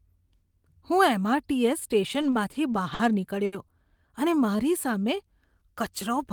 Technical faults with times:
2.21-3.01 repeated stalls (stutter)
3.45-3.54 short stall from a late packet
4.39-5.71 jitter buffer slow-down

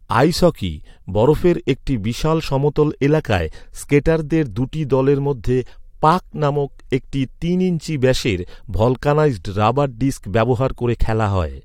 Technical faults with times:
11.01 overlap between stream segments

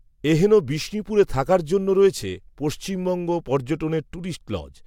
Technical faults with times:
none

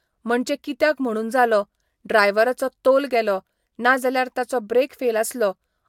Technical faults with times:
none

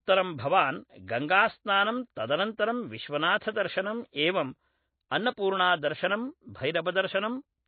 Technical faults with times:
0.00-7.68 MP3 compression

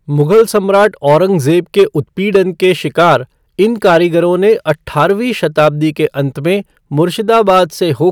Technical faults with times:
0.00-8.11 hard clipping

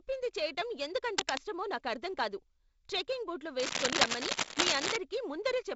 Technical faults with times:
1.18-1.38 cable scratch noise
3.59-4.97 cable scratch noise

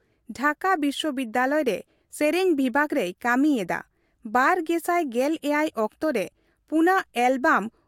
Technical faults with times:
none

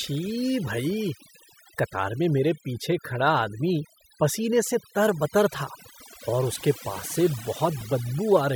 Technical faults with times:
0.00-8.55 DECT cordless phone buzz
0.00-8.55 overdone noise removal
7.81 lost LE Audio frames

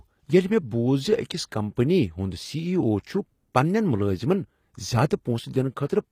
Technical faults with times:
0.00-6.12 HE-AAC compression

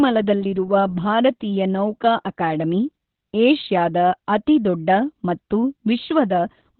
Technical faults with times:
0.00-6.79 Opus voice compression

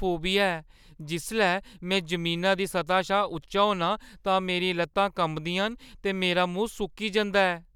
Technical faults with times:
none

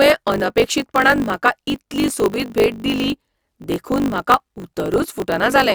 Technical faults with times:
0.00-5.75 block size mismatch (truncated)

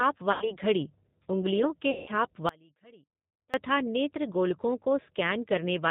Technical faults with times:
0.00-5.90 G.729 codec
0.32-0.54 VoIP packet loss concealed by the speech codec
1.91-2.09 VoIP packet loss concealed by the speech codec
2.49-3.54 audio dropout to a faint residue

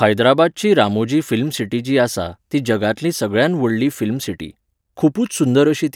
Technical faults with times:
none

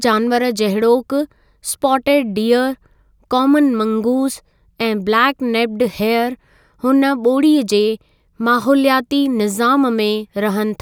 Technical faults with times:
none

